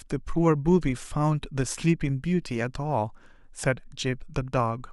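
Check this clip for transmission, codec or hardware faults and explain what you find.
No transmission, codec or hardware faults can be heard in this speech recording. Nothing in the audio calls for further explanation.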